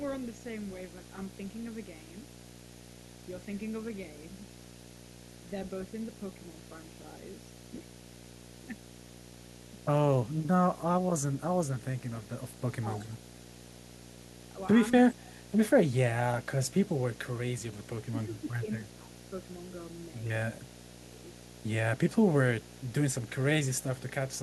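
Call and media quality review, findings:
Video or display buzz, entire clip: screen or video cable coupling into the audio path. Buzz at the 60 Hz field rate with hash above it, sitting about 20 dB below the speech and steady under every word and pause.

Echo leak, 0 to 24.4 s: far-end echo canceller likely leaving part of its loudspeaker pickup uncancelled and returning it. The result is a faint delayed copy of the voice trailing by 264 ms, roughly 35 dB down.

Speech suppressed in double talk, likely from the canceller failing to separate the near-end talker from echo during overlap and attenuating both. The voice dips at 10.15 to 10.32 s (deepest, around 20 dB), 12.99 s, 14.53 s, 18.11 to 19.09 s, and 20.53 s. The shorter dips are shallow, and the later ones are around 10 dB.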